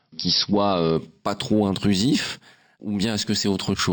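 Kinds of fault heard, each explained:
Imaging from linear upsampling: from "qui soient euh" on, straight-line interpolation from 12 kHz to 48 kHz dulls the top and leaves metallic mirror images at 6–12 kHz.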